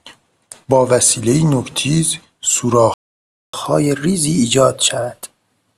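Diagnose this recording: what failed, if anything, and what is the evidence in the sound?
The failure is at the playback stage. A playback stall silences the speech mid-flow from 2.94 s to 3.53 s, about 0.6 s, most likely because the player ran short of data or its thread was blocked. It is one long gap, far longer than a click-length dropout.

From 3.53 s to the end, the player shows catch-up at higher speed. It resamples its backlog so the speech runs 1.1 times fast, with pitch raised about a semitone and a half. A sample-rate mismatch would shift the whole clip, but this begins only once the stall ends.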